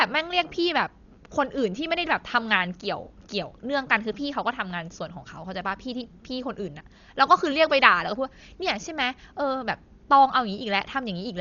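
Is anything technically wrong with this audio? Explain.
Yes, there are two faults.

Throughout, the speech sounds dull and rough, most likely from Dolby Digital compression. Nothing remains above 7 kHz. The damage is heavy, which fits a very low bitrate near 40 kbps. Many frequency lines get no bits and are filled with noise. Tones carry a fluttering haze.

At 4.53 s there is a block of digital silence. It lasts about 1.45 ms, which fits a 64-sample block of zeros. The signal drops straight to nothing and returns with no fade. The hole is too short to hear as a gap and comes across as a single tick.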